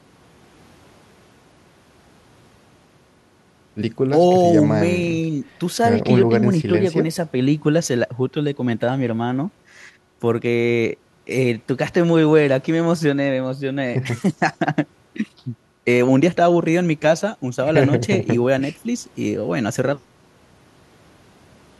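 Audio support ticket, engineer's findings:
No audible faults found.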